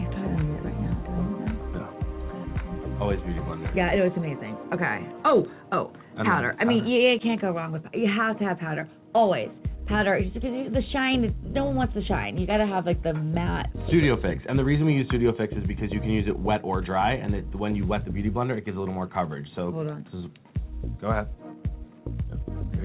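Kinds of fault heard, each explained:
No faults heard.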